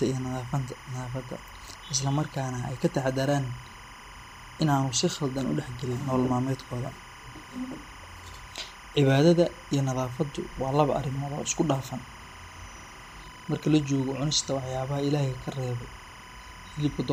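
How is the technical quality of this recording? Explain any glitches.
The recording has one continuous fault that runs under the speech for the whole clip.

Timecode bleed, from start to finish: linear timecode from a neighbouring track or cable is leaking into the audio path. The code is a square wave that flips between two pitches, roughly 1 kHz and 2 kHz, at a 25 frames-per-second rate. It sits about 20 dB below the speech and is heard as a steady, chirping warble behind the talker.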